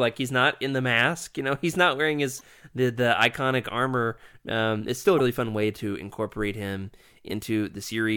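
Speech clip with three brief glitches, each a chirp, squawk, click or short hole of about 40 ms: at 2.37 s after "he's not wearing", at 5.16 s after "it's still", and at 7.83 s. This is damaged data in a compressed stream, where corrupted frames make the decoder lose sync and resume at the next readable frame.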